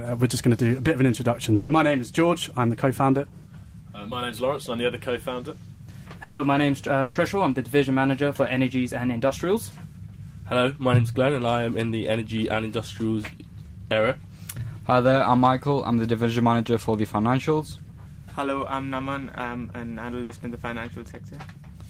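At 1.55 to 1.71 s and again at 7.01 to 7.17 s there is a burst of packet loss. Each time about 140 ms of audio fails to arrive, and the receiver carries the last sound forward, fading it as a held buzz or hiss. The sound then picks up later with that stretch gone. Unlike a brief concealed loss, the fill lasts long enough to be heard as a sustained, decaying buzz or hiss.

From 6.23 to 6.41 s the sound is replaced for about 160 ms by the same kind of fading continuation, and playback then resumes past a missing section. No silence or low noise floor follows the fade, which on its own would match a burst. The likely cause is a long network dropout that ended before the fill had fully died away.

At 9.27 to 9.31 s a short concealed packet loss removes about 20 ms. The decoder extends the preceding sound briefly and blends straight back, so it comes across as a quick smear or wobble rather than a held buzz. 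Its brevity separates it from the bursts, and a short consonant could disappear inside it.

A smaller burst of packet loss falls at 20.23 to 20.31 s. About 60 ms is lost and filled with a fading continuation before the sound jumps ahead.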